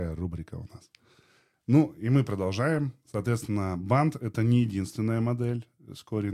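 A brief chirp-like blip cuts into the speech at 2.76 s, a short burst of misplaced energy that sits fairly low, peaking at around -35 dBFS. It is a corrupt frame decoded: bit errors in a couple of compressed frames were played anyway, so misread codes scattered energy into wrong frequencies.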